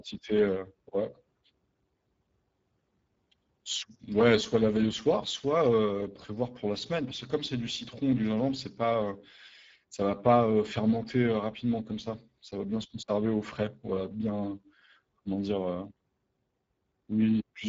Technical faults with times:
0.00-17.68 Speex codec

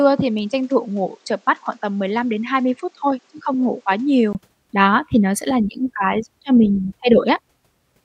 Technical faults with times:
0.00-4.35 input switched to a poorer device
7.28 corrupt frame decoded

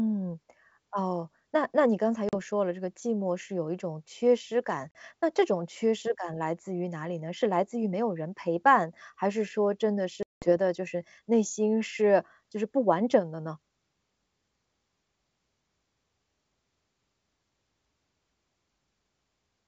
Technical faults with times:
2.29-2.34 packet loss on an ADPCM call
4.91-4.98 packet loss on an ADPCM call
10.23-10.53 packet loss on an ADPCM call

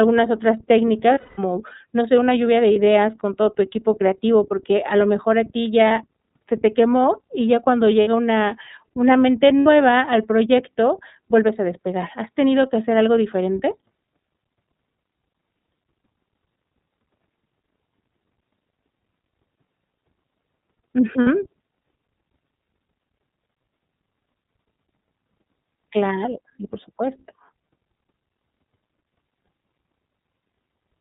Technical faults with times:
0.00-31.00 iLBC codec
1.14-1.39 lost iLBC frames
2.73-2.76 lost iLBC frames
5.88-5.91 lost iLBC frames
8.01-8.08 lost iLBC frames
9.60-9.67 lost iLBC frames
21.21-21.28 lost iLBC frames

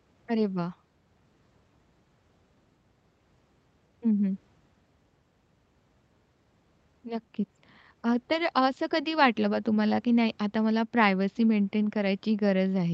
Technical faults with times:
none

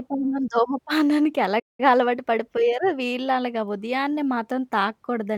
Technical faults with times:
1.59-1.80 playback stall

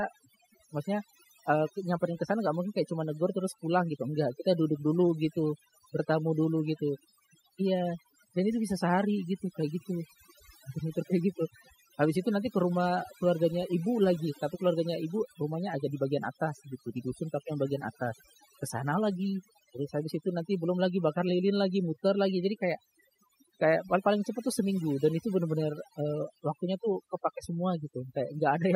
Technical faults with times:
0.00-28.75 overdone noise removal

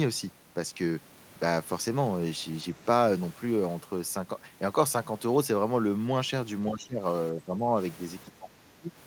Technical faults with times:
6.70-7.03 speech suppressed in double talk
7.32-7.75 speech suppressed in double talk
8.28-8.92 speech suppressed in double talk

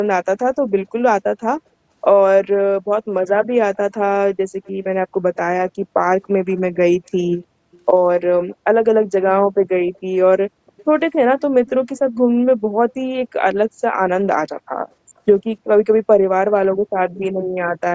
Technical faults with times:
4.64-4.68 echo leak
6.48-6.76 echo leak
7.72-7.78 echo leak
8.50-8.56 echo leak
9.58-9.69 background gated by the echo canceller
9.83-10.00 echo leak
10.67-10.84 echo leak
15.17-15.21 echo leak

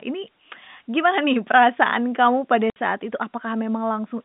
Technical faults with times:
2.70-2.76 packet loss filled with silence

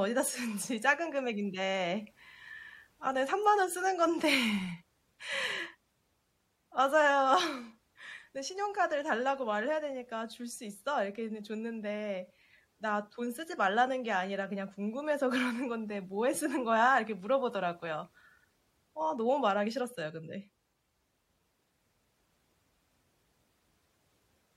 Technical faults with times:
none

